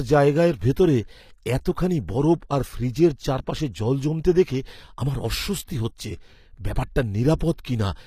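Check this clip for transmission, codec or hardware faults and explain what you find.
There's one fault, and it runs through the whole speech clip: HE-AAC compression, plainly audible. The top end is there but not real. Nothing at all sits above 14.9 kHz, and the s sounds come out gritty and lispy. That's most likely HE-AAC's band replication at work: the codec keeps only the lower spectrum and fakes the treble by copying lower bands upward under a rough envelope, so the harmonics don't line up. The damage fits a low bitrate, somewhere around 24 kbps.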